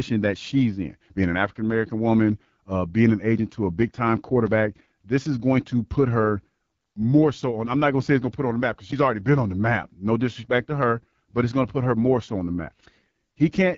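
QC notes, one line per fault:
Throughout: AMR wideband (HD Voice) codec. The speech sounds rough and raspy. The coder runs at 8.85 kbit/s, its second-lowest rate, too few bits for the pulse-driven vocal tract model. Content above 6.4 kHz is only shaped noise.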